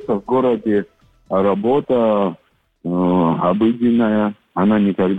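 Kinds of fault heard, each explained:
Nothing stood out on listening to this recording.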